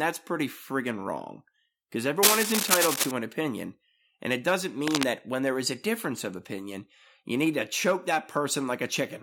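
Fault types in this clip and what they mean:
Cable scratch noise: two dense, uneven scratching bursts over the speech, the longer one louder than it, likely a worn cable or connector being moved.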